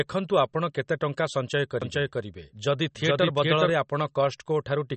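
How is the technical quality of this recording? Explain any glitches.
Technical quality is fairly poor: there's plainly audible compression damage across the whole thing, plus a stretch where the audio doubles up on itself.

MP3 compression: the whole clip has a watery, swirly sheen, and nothing comes through above 8.3 kHz. That fits a low-bitrate MP3 encode, likely around 35 kbps, where the encoder chops off the top and drops weak detail frame by frame.

Doubled audio track: from 1.82 to 3.70 s, a second full-band copy trails the original by roughly 400 ms at about the same level, with no reverb tail. It kicks in and cuts out abruptly, likely from a second, slower capture path getting mixed in.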